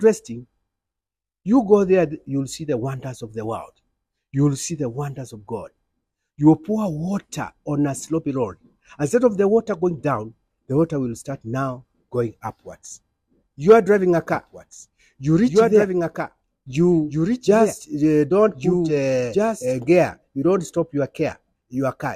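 A doubled audio track runs from 14.30 to 19.80 s, with a copy about two seconds late and roughly 5 dB quieter, likely from a second, slower capture path.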